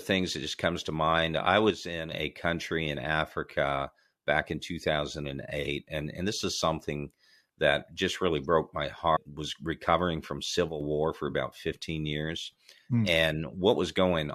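A speech clip with two kinds of fault. The level twice falls abruptly by about 6 dB, from 1.70 to 2.12 s, after "comes to mind I" and before "a country in", and from 10.69 to 10.81 s, after "recovering from" and before "war for". Each dip lasts under half a second. The sound drops and then snaps back. This is one channel dropping out, likely a lost stereo channel in the mono sum, which halves what both channels share. Right after "just really broke my", at 9.15 to 9.17 s, the sound jumps ahead. There is a small blip at the join. Programme is missing there. This is a skipped stream segment, likely a segment that failed to load so the player moved on to the next one.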